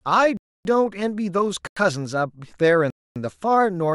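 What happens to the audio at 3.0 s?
At 3.0 s the speech falls into a block of digital silence. It runs from 2.90 s to 3.16 s, a gap of about 255 ms. For that span the audio is silent. The signal drops straight to nothing and returns with no fade. At this length the result is not a single tick. It is a clear hole in the speech.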